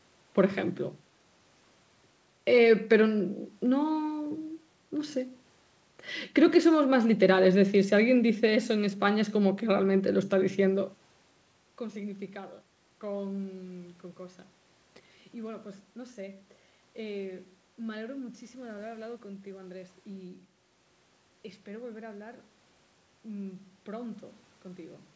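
Speech recorded through an ordinary call chain, band-limited at 8 kHz by the microphone processing and the G.722 call path, with room noise in the background and a level change near 10.5 s from the talker shifting position, and no technical faults.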